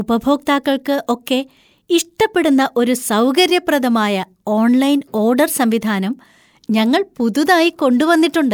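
No technical faults can be heard anywhere in the speech.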